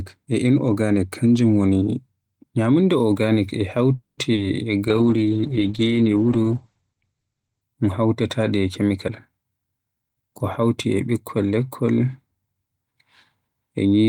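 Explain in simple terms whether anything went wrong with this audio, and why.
Yes, several things went wrong, all of them typical of an internet call.

At 3.95 s, right after "ñyamunda organic e", the sound stops for about 0.22 s, most of that near-silent, then picks up where it left off. This is a call audio freeze, most likely caused by packets held up in transit until the receiver's buffer ran dry. Nothing is lost, but a gap is inserted.

From 4.33 to 4.39 s, 40 ms of audio never arrived in time. This is short concealed packet loss: the receiver patched the hole by extending the preceding sound, which comes across as a brief smear or wobble.

From 4.88 to 7.69 s, the connection's capacity estimate fell and the encoder had to work with far less data. This call bitrate drop makes the speech rougher and muffled, with everything above 8 kHz cut off, until it recovers just before "un hawtatade".

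From 9.05 to 10.32 s, too much audio had piled up in the receiver's buffer, so it trimmed out tiny slices, about a fifth of a second in total. This jitter buffer speed-up makes the speech play roughly 17% faster at the same pitch, so it sounds hurried.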